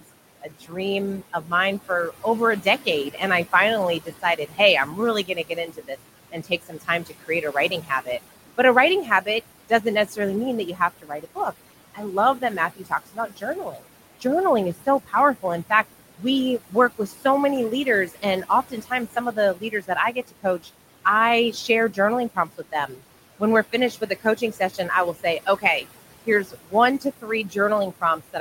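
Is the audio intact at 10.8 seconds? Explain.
No. From 10.74 to 17.25 s, right after "mean that you", there's speech cut by the noise suppressor. It mistakes stretches of the talker for background and pulls them down by as much as about 17 dB, so roughly a second and a half of soft consonants and endings sound swallowed or faint.

Underneath that, the noise suppressor artifacts are running here too. The suppressor dips what it treats as steady noise by about 17 dB frame by frame, so the room noise, sitting about 14 dB under the speech, pumps between phrases.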